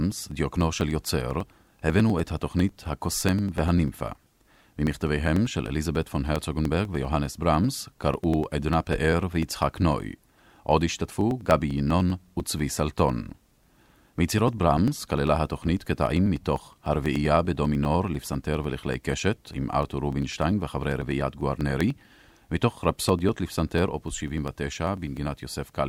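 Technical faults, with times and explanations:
0.12 to 25.77 s, periodic USB or driver dropouts: roughly 1 ms of audio is skipped every 0.099 s, a few hundred times, as something blocks the USB bus or driver on a fixed cycle. The ticks come evenly at about ten per second, unlike random clicks.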